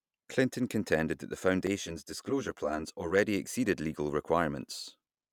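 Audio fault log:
1.67 to 3.19 s, channel delay (comb filtering): The speech turns hollow and phasey for this stretch. One channel arrives late by around 10 ms, and the two are folded to mono. Content shared by both channels then cancels at evenly spaced frequencies. The first notch sits near 50 Hz, with more following about every 100 Hz above it. These fixed gaps thin and colour the sound until both channels line up again.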